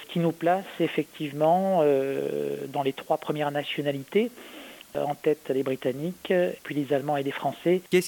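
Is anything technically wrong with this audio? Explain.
Yes. Low bit depth with dither runs throughout: the audio sounds like it was reduced to about 7 bits, with dither added before rounding, so the coarse quantisation error becomes a constant, even hiss sitting roughly 30 dB below the signal, without distortion.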